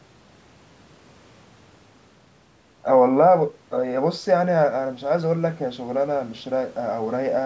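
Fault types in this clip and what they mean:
No faults can be heard in this speech clip. It has passed through a call's microphone processing, which trims the deepest bass and leaves nothing above 8 kHz, as expected for that path.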